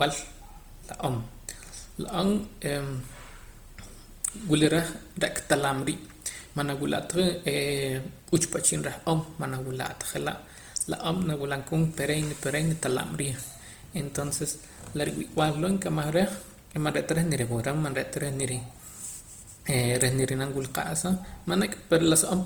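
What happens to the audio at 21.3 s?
The speech was likely passed through Opus compression in its music (CELT) mode at a rate near 24 kbps, across the whole clip including 21.3 s. Starved bands get filled with folded or noise content, so the speech sounds grainy and rough while still reaching 20.2 kHz.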